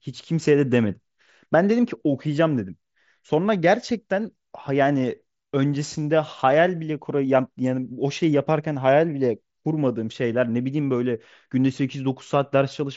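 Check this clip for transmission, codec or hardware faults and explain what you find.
No transmission, codec or hardware faults turn up in the clip.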